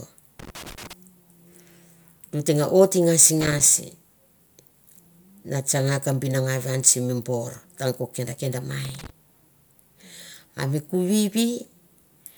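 Loose connector crackle breaks into the speech three times: 0.39 to 0.93 s, 3.41 to 3.66 s, and 8.85 to 9.10 s. A worn or dirty contact is making and breaking. The signal gets chopped into irregular bursts. Each burst sounds like scratchy crackle.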